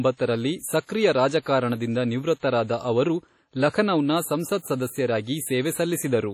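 Throughout, likely WMA compression at a low bitrate near 32 kbps smears coding noise across long blocks, so the speech rings and washes, with nothing above 17.6 kHz.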